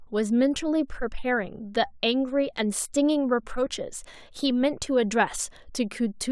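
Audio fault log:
No faults logged on the speech track.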